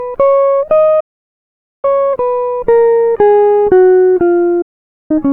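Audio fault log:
1.00–1.85 s and 4.62–5.11 s, digital broadcast dropout: the receiver stopped getting usable frames and muted. The music fades to silence in about 8 ms and is gone for 0.83 s, then 0.48 s, which fits runs of 32 ms frames being discarded. The missing passages are simply lost.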